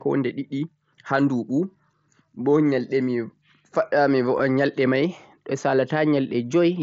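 At 4.38 s there is a tiny, nearly hidden hiccup, a brief smoothed-over blip in the speech. This is concealed Bluetooth headset packet loss: about 7.5 ms of audio went missing, which fits a single lost packet, and the receiver patched it by repeating a closely matching stretch of recent waveform, through the light grain of the mSBC link.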